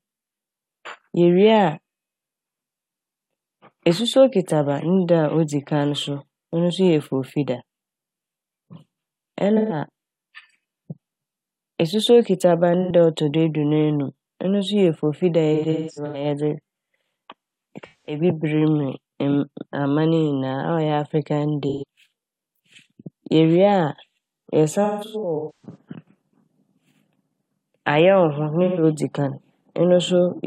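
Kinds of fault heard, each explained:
AAC frame loss with concealment: chunks of the stream drop out and the decoder patches them from the last good spectrum, so the speech goes briefly smeared and phasey, mostly for 85 to 213 ms, with longer scattered patches near 15.5 s and 24.8 s.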